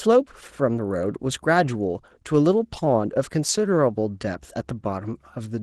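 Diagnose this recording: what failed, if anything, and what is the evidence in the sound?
Opus voice compression at the codec stage is present for the whole clip. The speech sounds hoarse and slightly robotic from the start, which fits a low bitrate near 16 kbps. The excitation is coded coarsely in the lower band while an upper band persists, so this is not plain low-pass filtering. The damage is steady, with no dropouts, so it is not network packet loss.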